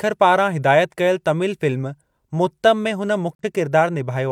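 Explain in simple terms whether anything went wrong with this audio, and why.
Near the end, from 3.35 to 3.43 seconds, the speech briefly vanishes. This is a digital broadcast dropout. The receiver lost a short stretch of the signal and muted until clean data returned. The gap fits a single lost frame. That sound is gone for good.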